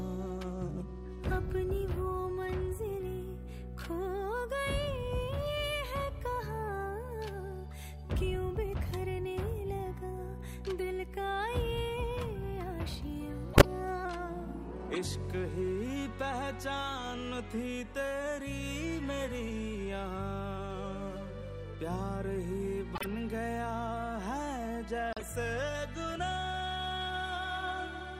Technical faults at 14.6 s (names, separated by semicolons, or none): drift correction step